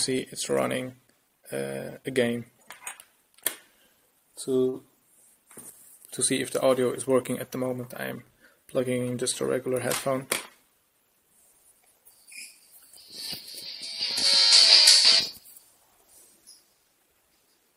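At 4.69 to 4.76 s the audio briefly stalls. A sound is held too long, with a faint buzz or dip before it moves on. Nothing is lost. The audio resumes exactly where it paused. This is a short stall from a late packet. One packet missed its playout time and the jitter buffer ran dry. The receiver stretched the last sound by 39 ms to cover the gap. Everything after it plays 39 ms later.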